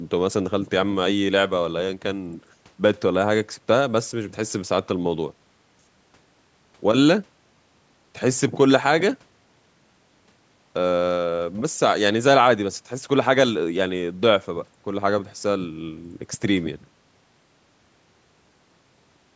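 Nothing technically wrong turns up in this speech recording: it has gone through a call's microphone processing, which trims the deepest bass and leaves nothing above 8 kHz, and that is just how such a path normally sounds.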